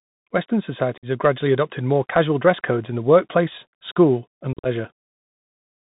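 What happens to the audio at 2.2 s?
At 2.2 s the speech is passing through a Bluetooth CVSD headset codec, and this runs the whole clip rather than starting there. The codec sends a single up-or-down bit per sample, which fits a 64 kbps stream, and its step size keeps adjusting. The band stops near 4 kHz, so the sound is narrow and muffled. Fast, bright parts overrun the step and crackle. Sibilants come out gritty, over a grainy hiss.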